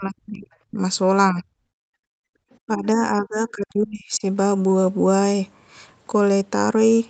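Speech suppressed in double talk opens the clip: from 0.0 to 0.5 s the speech sinks by roughly 40 dB, then again at 0.68–0.79 s (deep) and 1.32–1.44 s (a shallower dip of about 10 dB). This is likely the echo canceller mistaking overlapping far-end sound for echo and pulling the talker down with it. What marks it is the foreground speech itself cutting out.

From 1.67 to 1.99 s comes background gated by the echo canceller: the room tone drops by about 40 dB while the loudspeaker plays, then returns. Here it is the ambience between speech that vanishes, not the speech.

Double-talk suppression returns at 2.27–2.32 s with a sharp, deep cut.

At 2.52–2.56 s, the other side's voice leaking through is heard as a brief, faint scrap of a second voice, about 40 dB under the speech. This is likely residual loudspeaker echo the canceller missed. Unlike the dropouts, it adds sound.

The suppression recurs at 2.67–3.03 s (a mild dip of about 10 dB) and 3.2–4.24 s, a long stretch of roughly 30 dB.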